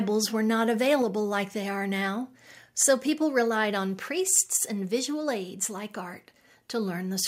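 A speech recording with two faults. At about 1.02 s, right after "were not", the microphone volume steps down by about 3 dB, likely the call software turning the input down. Then from 4.37 to 4.39 s, after "so people relied on", there's microphone overload: the peaks go about 1 dB past the converter's limit, with a small fraction of samples flattened, giving a brief harsh crackle. That's likely from the input volume being set too high.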